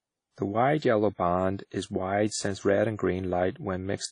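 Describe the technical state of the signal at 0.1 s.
At 0.1 s the speech carries WMA compression damage that runs through the whole clip, likely from a low-bitrate encode near 32 kbps. Long transform blocks smear quantisation noise, giving a ringing, washy hiss. A spectrogram shows a hard ceiling near 10.1 kHz and patchy, gapped weak detail.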